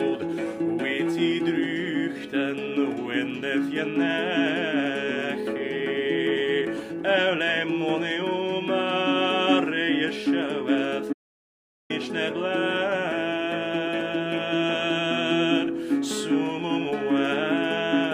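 The audio has an audio dropout to silence from 11.13 s to 11.90 s, about 0.77 s in which the signal cuts to silence with no room tone before resuming mid-flow. The likely cause is a brief loss of input, with the recorder continuing to write silence.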